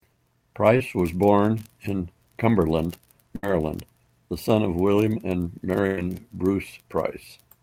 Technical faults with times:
3.36-3.44 burst of packet loss
5.87-5.98 burst of packet loss

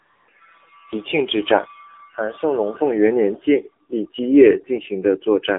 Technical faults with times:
0.00-5.58 AMR narrowband mobile codec

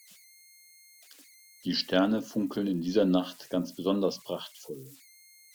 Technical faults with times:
0.00-5.55 converter idle tones

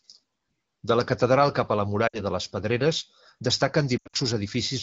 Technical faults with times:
2.07-2.20 lost AMR speech frames
3.98-4.16 lost AMR speech frames

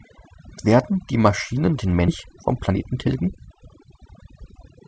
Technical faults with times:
0.00-4.88 overdone noise removal
2.08-2.10 skip ahead
2.26-4.88 jitter buffer speed-up

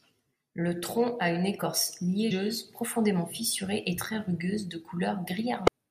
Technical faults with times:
2.30 damaged data in a compressed stream
5.67 damaged data in a compressed stream

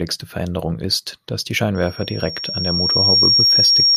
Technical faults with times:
1.75-3.96 loudspeaker feedback squeal

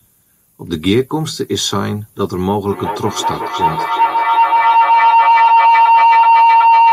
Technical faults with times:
2.69-6.92 feedback howl

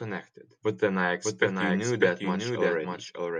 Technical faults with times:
0.00-3.39 doubled audio track

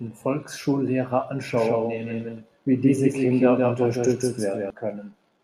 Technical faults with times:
1.54-4.70 doubled audio track

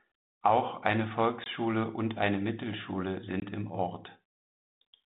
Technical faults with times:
1.44-1.48 packet loss on an ADPCM call
3.40-3.47 packet loss on an ADPCM call

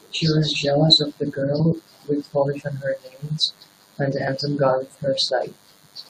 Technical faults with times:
0.00-6.10 DECT cordless phone buzz

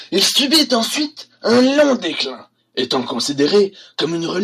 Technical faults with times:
none

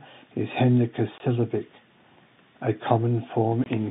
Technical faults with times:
1.18-1.20 packet loss filled with silence
3.64-3.66 packet loss filled with silence

